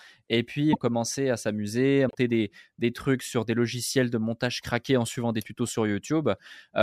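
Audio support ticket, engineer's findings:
0.72–0.78 s: sound skips ahead with a brief glitch, about 58 ms, roughly two frames at 26.1 ms. Spectrogram shows a content break; waveform shows an abrupt discontinuity. Likely broken MP3 bit reservoir after dropped frames.

2.08–2.15 s: same jump-and-glitch, about 70 ms, under three frames. Same content break and waveform break. Likely post-cut frames decode reservoir bytes borrowed from missing predecessors as garbage until the reservoir refills.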